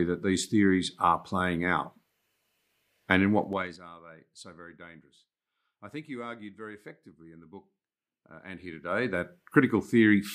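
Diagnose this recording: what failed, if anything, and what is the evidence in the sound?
The gain stage in the buffer or driver processing applied level changes in unsmoothed steps, causing zipper noise. From 3.44 to 3.81 s, just before "are they so very", the level drops by roughly 20 dB in 3 dB jumps about twenty times a second, and each jump adds a small click. From 8.36 to 9.38 s the level climbs by roughly 20 dB in 1 dB steps at the same rate, producing a finer ticking that rides on the speech.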